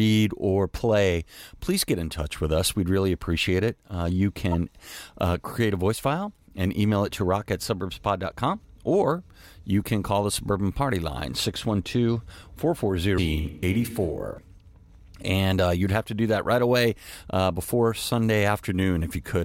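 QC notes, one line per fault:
4.51–4.54 s and 13.17 s, damaged data in a compressed stream: brief glitches where corrupted bytes made the decoder misread frames and hunt for the next frame header.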